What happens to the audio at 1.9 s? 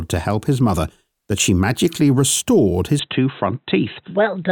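Nothing goes wrong at 1.9 s; the speech carries on intact through that moment, with no dropout, click or distortion.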